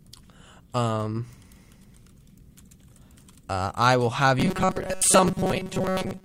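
From 4.39 s, right after "uh I will have", to the end at 6.25 s, the speech turns into a rigid metallic buzz near 188 Hz: robotic sound from repeated short buffers, likely caused by audio arriving too seldom, so that roughly 70% of this stretch is a short chunk played over and over.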